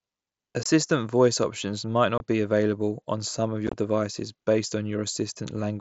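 Unconcealed Bluetooth headset packet loss occurs at 0.63–0.66 s, 2.18–2.20 s and 3.67–3.73 s. Lost voice packets leave abrupt silent holes of up to 22.5 ms, with 37.5 ms lost in all across the third.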